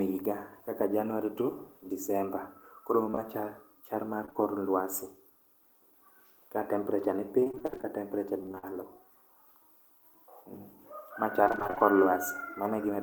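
Around 3.11 to 3.19 s there's short concealed packet loss, two back-to-back 20 ms holes patched by extending the last sound, giving a quick smear. Another hits 4.25 to 4.44 s, with two more right after "chal mar" at 4.29 and 4.33 s, a small wobble stretched by a hair. From 7.40 to 8.65 s, after "ka temperature ni", repeated packet loss (robotic sound) sets in: gaps up to 43 ms keep getting patched, so roughly a quarter of the stretch sounds choppy. Overlapping that, 8.00 to 9.12 s, a jitter buffer slow-down repeats pitch periods to rebuild its reserve, adding 51 ms and playing at 96% speed, so the sound drags slightly. Then 11.44 to 11.86 s brings more robotic packet loss, with gaps up to 26 ms and about half the stretch concealed, so it sounds choppy with pieces missing.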